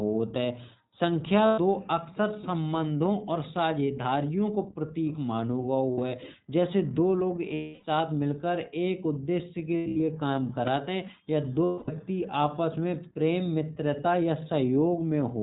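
The whole clip sounds narrow and a little rough and synthetic, with nothing above 4 kHz. The iLBC codec produces this: it codes each short frame's excitation on its own, in a way that fits 20 ms frames at about 15.2 kbps, and discards the upper band. The coding damage is plainly audible.

There are five places where the sound turns briefly into a held, buzzy, breathy vowel before snapping back clear. The first is from 1.46 to 1.60 s, lasting 120 ms. The second is 60 ms long, from 5.92 to 5.99 s, between "साझेदारियों को प्रतीक मानो" and "है जैसे दो लोग". The longest runs 280 ms, from 7.54 to 7.84 s, right after "है जैसे दो लोग". Between 9.77 and 10.01 s the dropouts are scattered, totalling 200 ms, with the longest stretch about a tenth of a second. The last is 240 ms, from 11.64 to 11.90 s, after "काम करत हैं या". These are lost iLBC frames. The decoder fills each gap by repeating the last pitch cycle mixed with noise, and the fill fades over the longer gaps. 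Because every frame decodes independently, the sound recovers almost at once.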